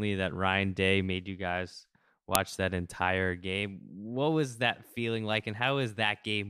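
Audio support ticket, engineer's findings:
Sharp, loud click at 2.35 s in the speech. File header played as audio: a WAV piece was joined without stripping its header, so those header bytes play as samples.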